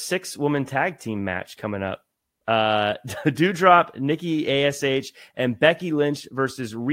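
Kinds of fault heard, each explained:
No technical fault can be heard in this speech recording. There is therefore no kind of fault to name or explain here.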